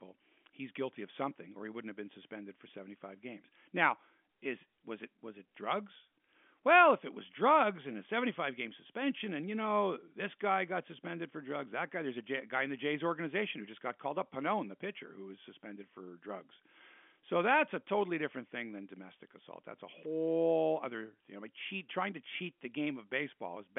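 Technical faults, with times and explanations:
Nothing's gone wrong here: the speech simply carries the narrow band of ordinary G.711 telephone coding, with nothing above about 3.6 kHz, which is just how a phone line delivers it.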